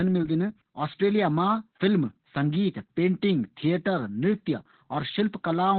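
Opus voice compression runs through the whole clip, heavily damaging the speech from start to finish. The sound points to the SILK linear-prediction coder working at a very low rate, around 8 kbps, and squeezed into narrowband: nothing survives above about 4.4 kHz. With so few bits, the excitation is coded coarsely, so the voice sounds muffled and boxy, with a hoarse, slightly robotic buzz in place of natural breathiness.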